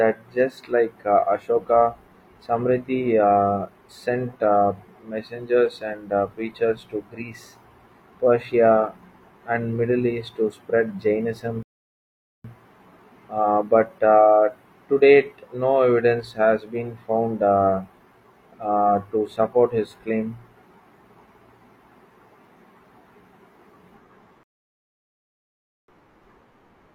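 Speech clip with two rebuffering stalls: the audio drops to silence at 11.63 s until 12.45 s, and again at 24.43 s until 25.88 s, then picks up exactly where it left off. The player starved for data, so nothing's missing, just about 0.82 s and 1.45 s of dead air added.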